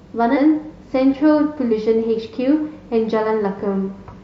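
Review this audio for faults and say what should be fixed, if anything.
The speech has three spots where compressed frames are skipped: 0.33–0.38 s, 1.68–1.73 s and 4.09–4.13 s. Each time, the audio leaps forward. The first jump loses around 0.4 s, the second around half a second, the last a couple of hundred milliseconds, which fits dropping whole frames of about 46.4 ms. To prevent it, verify the file's integrity and re-fetch or re-encode any damaged frames so the decoder doesn't discard them.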